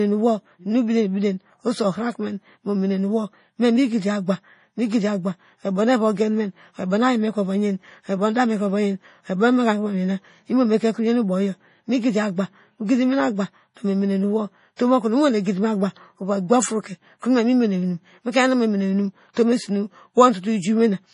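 Speech recording with heavy, watery codec damage throughout, most likely MP3 compression at a low bitrate of around 32 kbps. Pre-echo appears as brief hiss before sharp attacks, at 14.76–14.79 s (31 ms) just after "mene nowo" and at 19.33–19.37 s (33 ms), where block-wide quantisation noise leaks ahead of each transient.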